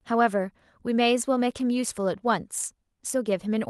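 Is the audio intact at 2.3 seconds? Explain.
Yes, the audio is intact at 2.3 seconds, with no dropout, glitch or distortion at that moment.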